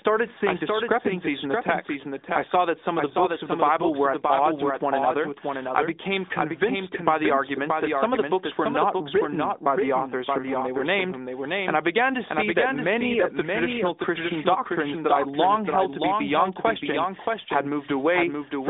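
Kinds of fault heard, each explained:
Doubled audio track: throughout, a dry copy of the speech trails about 0.7 s behind, roughly 5 dB quieter, likely captured again by a slower path.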